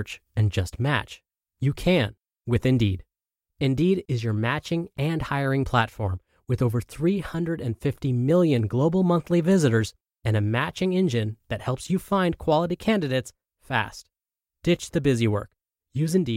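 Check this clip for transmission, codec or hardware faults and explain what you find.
A block of digital silence at 4.97 s, between "is your matching" and "and hiring platform with", interrupts the speech. For about 11.6 ms, which fits a 512-sample buffer that went unfilled, the output dropped straight to silence and back, so the gap is heard as one short tick.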